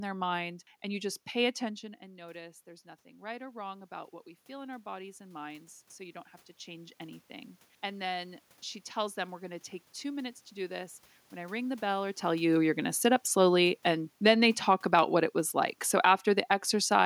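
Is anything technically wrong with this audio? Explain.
Yes. The automatic gain control audibly pumps the level in three places.

Automatic gain rising runs from 2.16 to 8.47 s, starting after "just pay attention and" and ending before "she tells them". Around 1.5 s the talker seems to move away from the microphone, and the input drops by about 16 dB. The gain control reads this as too quiet and slowly adds about 10 dB over six seconds. The voice and the room noise swell together.

Automatic gain falling happens twice. The first runs from 12.23 to 15.25 s, between "ring the bell or" and "it was like", just after the talker seems to come closer at about 12 s. The second runs from 15.89 to 17.01 s, after "it was like". In each case the control judges the input too loud and pulls the gain down, by about 3 dB and then about 4 dB. The sound starts loud and then sinks, with its background, over a second or more.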